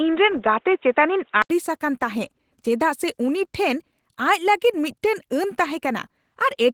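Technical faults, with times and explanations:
throughout: Opus voice compression. The speech sounds plainly hoarse and slightly robotic, with coarse excitation coding that fits a roughly 16 kbps hybrid setting. Full band is kept.
0.0–1.5 s: Input switched to a poorer device, likely. The opening is dull and boxy with nothing above 3.8 kHz, a few dB different in level, and faint new background noise. There's an 80 ms gap at 1.5 s where it clears up.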